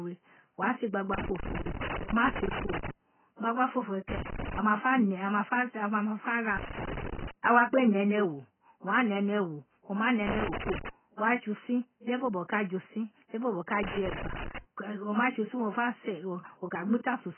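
Speech, band-limited throughout, with nothing above 3.1 kHz and heavy codec damage: the top end is cut away, sibilants turn dull and fizzy, and sustained sounds warble. This is likely AAC compression, specifically AAC-LC at a very low rate, which fits around 12 kbps. At that rate the encoder lowers its cut-off and leaves gaps or substitute noise in the bands it keeps, so the spectrum smears. Loose connector crackle appears three times: from 1.14 to 2.91 s, between "wa se" and "gbagbaofofo we"; from 10.27 to 10.89 s, between "ma nẹ" and "wa tse"; and from 13.83 to 14.58 s. Each is an irregular burst of crackle and scratching. A worn or dirty contact makes and breaks as it moves, chopping the signal and adding pops from any DC on the line.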